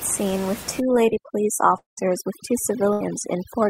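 From 0.8 s, just after "scene with", overdone noise removal takes hold and lasts to the end. The suppressor is set too hard. It cuts individual frequency bands that sit near its noise estimate. Quiet parts of the speech vanish with them. The background drops and breaks up into twinkling specks. The room noise sits about 14 dB below the speech.

At 1.77 s the audio stops arriving until 1.99 s. The last sound is stretched into a fading buzz or hiss, then a stretch of near silence. About 200 ms of speech never plays. Speech resumes further on. This is likely a long network dropout.

A burst of packet loss follows at 2.93 s, ending at 3.02 s. About 80 ms goes missing. The receiver holds the last sound and turns it down across the gap. It comes out as a brief fading buzz or hiss. Then speech jumps ahead.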